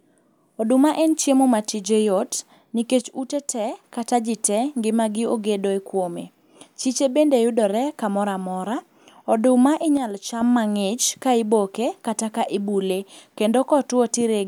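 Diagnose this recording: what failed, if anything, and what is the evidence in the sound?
Speech level falls abruptly by about 6 dB from 3.01 to 3.84 s, just before "kata ji tee ngimagi", and again from 9.97 to 10.41 s, before "mang'ich ka iboke kata". That's one channel dropping out, likely a flaky analogue connection, halving the mono sum.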